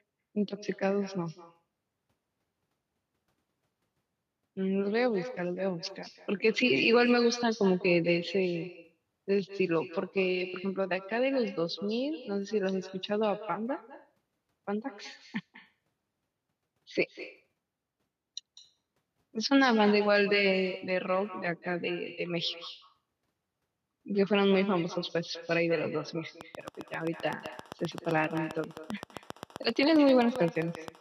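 Throughout the speech runs an echo with no canceller: the far end's loudspeaker feeds the microphone, and the returning copy, about 15 dB down, trails each phrase by roughly a fifth of a second. On a spectrogram every syllable has a fainter, smeared duplicate just behind it.

From 26.41 to 30.89 s a train of clicks ticks steadily at 7.6 per second, around forty in all, peaking about 10 dB above the speech and continuing through pauses. The likely cause is interference or a faulty connection or power supply. The waveform shows evenly spaced spikes, and the spectrogram shows thin full-band vertical lines.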